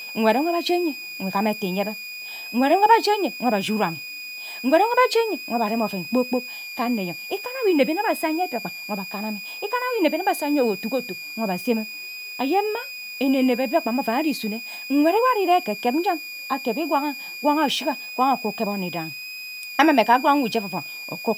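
A switching supply whistle runs throughout the speech. A power supply's audible oscillation sits around 2.4 to 2.5 kHz, roughly 15 dB below the signal.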